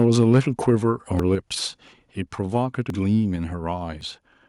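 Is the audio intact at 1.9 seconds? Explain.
No. At 1.88 s the speech jumps ahead, losing about a tenth of a second, heard as an abrupt skip. This is likely a dropped buffer (overrun), where samples were overwritten before being read. The waveform shows a sudden discontinuity, and the spectrogram a thin vertical broadband line.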